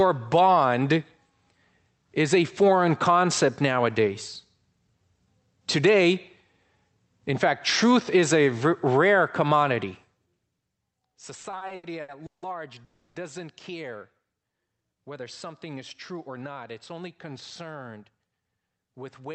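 Speech carried over an Opus call path whose audio stops at about 8 kHz, with three jitter-buffer faults. From 11.41 to 12.45 s there are repeated stalls (stutter): seven separate gaps, the longest 160 ms, where the receiver stretched the last sound while late packets caught up. That is about 410 ms of concealment, some 39% of the span, with nothing lost. The choppy, repeated pattern sets it apart from a single freeze. From 12.84 to 13.18 s comes one call audio freeze, a continuous 310 ms hold of the last sound that never reaches silence. It is likely caused by a sudden 310 ms jump in network delay, and it reads as one unbroken hang rather than stutter. Just after "whether something is", from 16.12 to 16.51 s, a jitter buffer speed-up trims around 40 ms of pitch periods, so the speech runs at 109% speed. The pitch stays the same, which distinguishes it from a resampling speed change that would raise the pitch.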